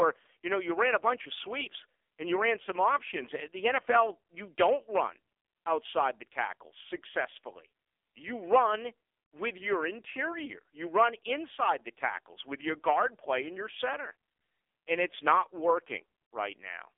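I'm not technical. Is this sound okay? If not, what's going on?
No. For the whole clip the speech has been through the AMR narrowband mobile codec, the kind of compression used on older mobile phone calls, and it has been squeezed hard. Nothing above about 3.6 kHz gets through, and the low end stops near 300 Hz, so the voice sounds thin and boxed-in. The codec rebuilds the voice from a simplified model, which at this heavy setting makes it buzzy and synthetic-sounding.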